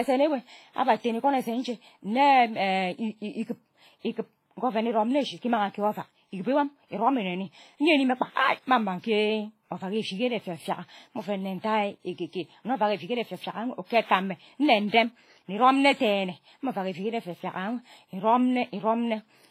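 All the way through this speech the top end stops dead at about 16.1 kHz, and you hear two sets of coding artefacts stacked on each other. That's likely transcoding between lossy codecs, which fits a low-rate WMA pass re-encoded as HE-AAC.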